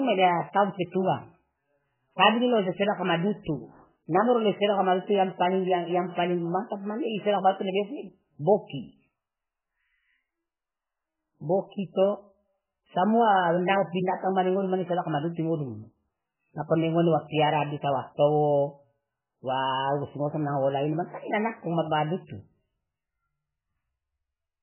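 Speech that sounds watery and swirly from start to finish, with nothing above 3.1 kHz and s sounds turned to metallic chirps. The likely cause is heavy MP3 compression, at a bitrate that sounds as low as about 8 kbps, so the encoder cut the treble and let weak frequency lines flicker between frames.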